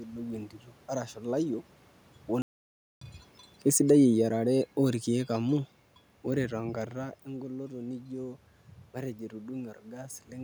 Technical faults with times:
2.42-3.01 playback stall
3.75-5.69 automatic gain falling

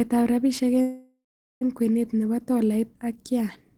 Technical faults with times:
0.81-1.63 call audio freeze

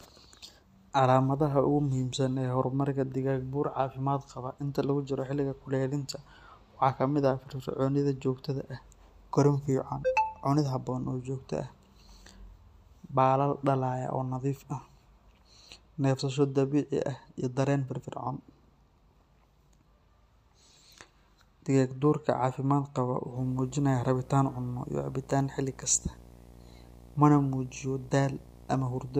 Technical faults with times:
23.36-29.20 video or display buzz

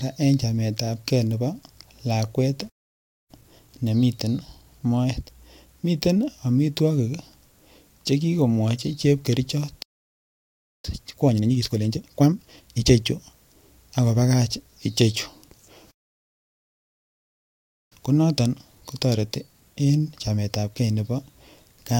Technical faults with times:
2.69-3.31 playback stall
3.31-6.31 time-compressed catch-up
9.82-10.85 playback stall
10.85-12.87 time-compressed catch-up
15.91-17.92 playback stall
17.92-20.92 time-compressed catch-up

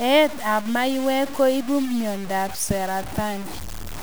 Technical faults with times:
0.00-4.02 low bit depth without dither

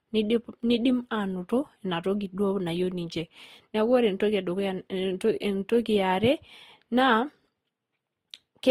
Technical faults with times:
0.00-8.71 transcoding between lossy codecs

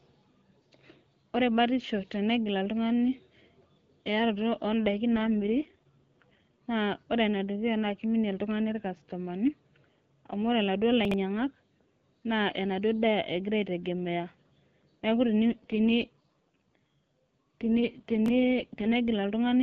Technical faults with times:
5.14-6.59 AMR rate drop
11.05-11.14 chunks out of order
15.46-18.96 AMR rate drop
18.26-18.30 chunks out of order

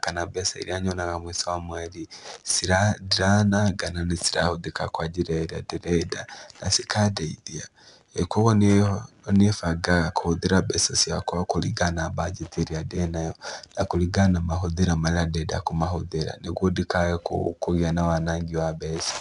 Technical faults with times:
0.00-19.21 4-bit ADPCM compression

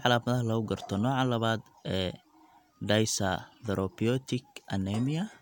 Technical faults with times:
none

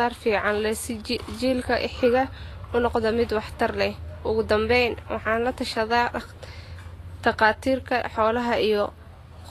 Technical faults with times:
0.00-9.51 Vorbis compression

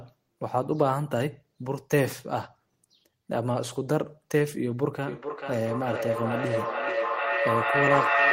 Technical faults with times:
5.07-8.32 feedback echo between two devices

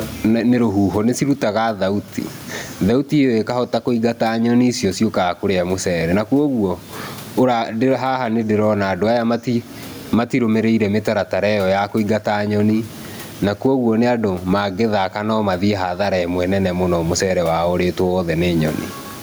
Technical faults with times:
0.00-19.22 gain pumping

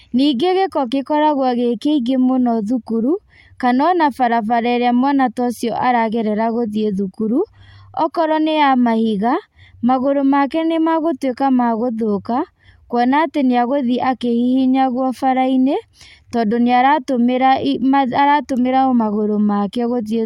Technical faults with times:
none

